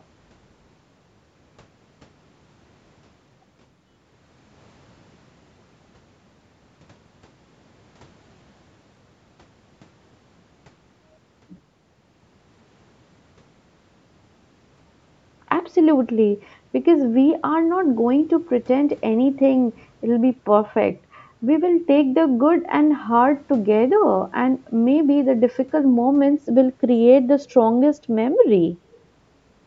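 No faults to report: the speech carries only the normal signature of call microphone processing, with the lowest bass trimmed by its high-pass filter and nothing above 8 kHz.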